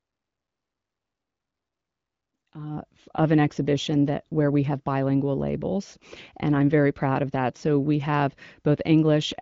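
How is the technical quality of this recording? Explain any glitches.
No glitches are audible in this recording.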